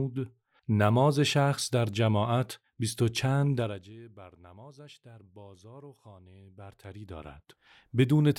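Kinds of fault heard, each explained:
Zipper noise: the gain control is changing level in discrete jumps of about 1 dB or less, around 40 times a second, rather than ramping smoothly between them. Each jump puts a tiny discontinuity in the waveform, so a fine ticking rides on the sound while it moves. It shows during a fade down of roughly 25 dB from 3.53 to 3.95 s and a rise of similar size from 6.32 to 7.85 s.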